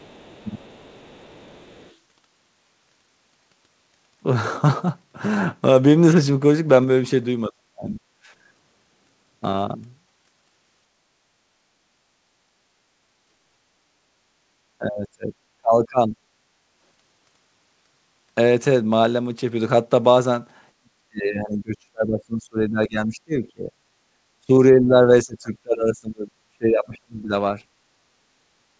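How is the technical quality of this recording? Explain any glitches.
The recording has audible problems that come from echo control on a speakerphone-style call. The call codec's ceiling at 8 kHz is also audible in the audio, which sounds band-limited above that point.

From the start to 1.95 s, a faint second voice sits underneath, roughly 30 dB below the main talker. This is likely the other side's voice leaking through. The far end was played on a loudspeaker, picked up by the microphone, and not fully removed by the echo canceller, so a residue of it survives in the mix.

Five times the talker's speech sags or breaks up. It happens at 0.44 to 0.71 s with a mild dip of around 15 dB, at 7.49 to 8.0 s, where it sinks by about 35 dB, and at 14.79 to 16.15 s, 20.75 to 23.75 s and 24.42 to 27.33 s, each dropping by about 30 dB. This is likely speech suppressed in double talk. Both sides spoke at once, and the canceller, unable to tell the talker from the loudspeaker echo, pulled everything down.

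At 24.07 to 24.14 s, the room sound briefly dips by about 14 dB for roughly 70 ms, then returns. This is the background gated by the echo canceller. While the loudspeaker was active, the canceller clamped the microphone hard for a moment and then released it.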